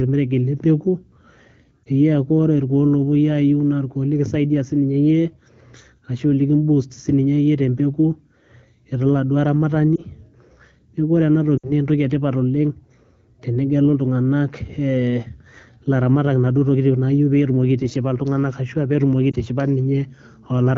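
Lost AMR speech frames at 1.84, 9.96, 11.58 to 11.72 and 19.31 s: corrupted frames failed their checksum, so the wideband decoder repeated the last good pitch and vocal tract settings at falling gain, giving brief dips and, around 11.6 s, a drop to near silence.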